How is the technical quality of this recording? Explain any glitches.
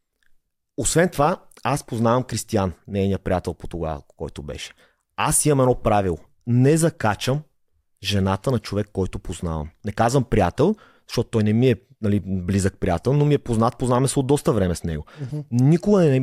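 No glitches turn up anywhere in this speech recording, so there's nothing here to explain.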